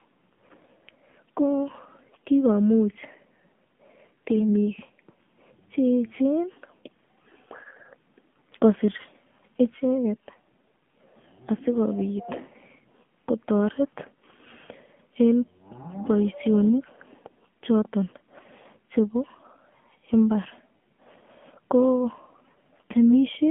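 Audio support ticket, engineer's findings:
AMR narrowband mobile codec, throughout: speech band-limited to about 150 Hz–3.4 kHz, nothing above 4 kHz. Plainly audible buzzy, synthetic timbre from low-bit pulse excitation of the vocal-tract model, consistent with the 7.4 kbps AMR-NB mode.

AMR bit errors, 4.32–4.43 s: brief hoarse, scratchy, gargly burst, pitch and level roughly held. Weak-link corruption, a few percent of bits, in unprotected frame fields misplaces excitation pulses and skews gain/spectrum; span fits about five 20 ms frames.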